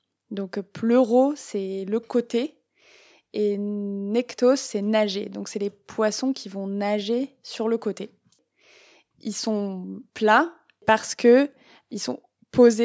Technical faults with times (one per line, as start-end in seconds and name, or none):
none